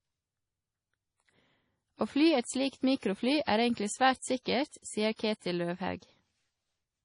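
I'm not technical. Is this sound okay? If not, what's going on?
No. The speech was most likely squeezed into a small, low-quality file at some point and later saved again as a large, high-quality one. That is low-bitrate audio saved at a high bitrate. The bigger file can't bring back what the first squeeze threw away, so from start to finish the speech has nothing above about 10.5 kHz. It sounds dull, missing its crisp top, and the flaws left by the first squeeze are still there.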